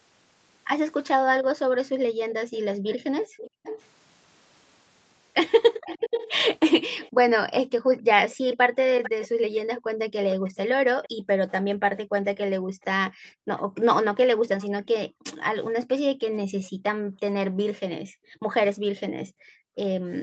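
From 1.05 to 3.82 s, a faint second copy of the speech trails the original by about 474 ms. It sits roughly 15 dB below the direct speech. This is an echo leak. The likely cause is a far-end loudspeaker feeding its microphone, with the echo canceller failing to remove all of it. The leftover was sent back down the line.

Between 3.5 and 3.63 s, the room sound drops sharply for about 150 ms, by up to about 40 dB. This is background gated by the echo canceller. The canceller clamped the microphone hard while the loudspeaker played, then let go.

The echo returns from 5.85 to 12.84 s. It is stronger here, about 10 dB below the speech, with a delay of 448 ms.

From 7.79 s to the end, the gating comes back. The background drops, again by up to about 40 dB, as the canceller ducks the microphone.

A third, weaker echo runs from 14.61 to 16.64 s. It lags by 470 ms and sits about 25 dB down.

Throughout, the Opus call path limits the sound to 8 kHz.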